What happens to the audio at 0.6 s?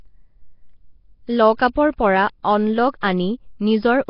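Nellymoser compression, present throughout and so at 0.6 s, likely from the old Flash codec starving weak bands of bits and filling them with noise, leaves the speech rough, hissy and underwater-smeared, with nothing above 5.3 kHz.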